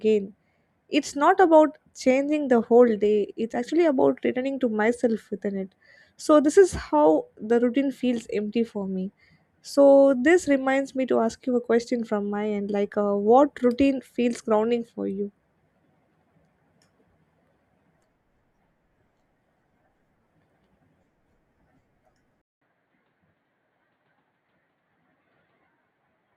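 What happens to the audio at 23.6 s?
At 23.6 s the audio is inside an input switched to a poorer device, running from 22.42 s to the end of the clip. It opens with a 200 ms silence, after which the sound is dull and boxy, with nothing above 4.6 kHz, a few decibels quieter, and over a faint new noise floor. That abrupt change in bandwidth, level and background is what you hear when a recording likely jumps mid-take to a narrower second microphone or a headset's call profile.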